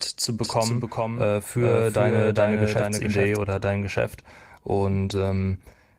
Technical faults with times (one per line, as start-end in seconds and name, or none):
0.42-3.36 doubled audio track
3.81-3.83 lost packet rebuilt from error correction
5.09-5.43 lost packet rebuilt from error correction